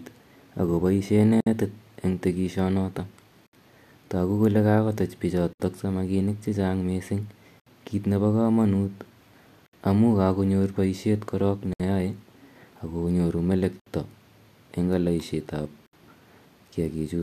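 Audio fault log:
1.41, 3.47, 5.53, 7.60, 9.66, 11.73, 13.80, 15.86 s: gap at a join of encoded pieces. A 59 to 67 ms silence opens every 2.0 s in the speech, first after "ak kopaishe". Separately encoded 2 s pieces were joined with their encoder delay and end padding left in. Unlike a dropout, nothing is skipped: the speech resumes exactly where it stopped.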